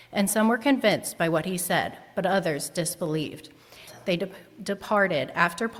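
The audio jumps forward abruptly at about 3.87 s, with a short blip running to about 3.92 s. That's a stream segment skipped: a chunk of the stream likely failed to load, so the player carried on from the next one and the material in between is missing.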